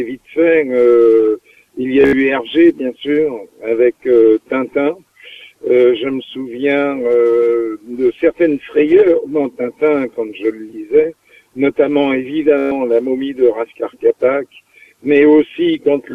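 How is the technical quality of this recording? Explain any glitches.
Two short Bluetooth stutters mar the recording, at 2.01 to 2.13 s and 12.58 to 12.71 s. Packets arrived late or not at all, so the receiver replayed its last short slice of audio until fresh data came. The repeats form a buzzing, machine-gun stutter of about 102 ms in the first event, including a 73 ms run, and about 131 ms in the second. Unlike a plain dropout, the gap is filled with repeats rather than silence, and the sound then resumes further along, as if it had kept playing.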